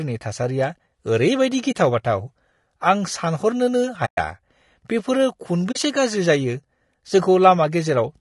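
Throughout, the speech sounds rough and grainy, with noise filling the gaps between harmonics, likely low-delay AAC compression at a low bitrate around 32 kbps. This is codec coarseness, not background hiss. At 1.71 s, 4.05 s (about 120 ms) and 5.71 s (about 40 ms), AAC frame loss with muting leaves silent holes that fade out and back in, unlike hard-edged dropouts.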